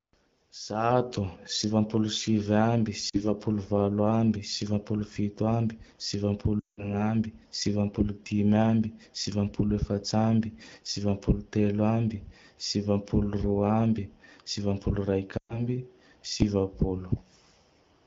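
Lost AMR speech frames at 3.09 s (before "valo ambe sivapolo fito"), 6.60–6.94 s (before "ambe sivampolo dimy ambe") and 15.38–15.66 s: the decoder stretches the last good sound and fades it, unlike a hard gap.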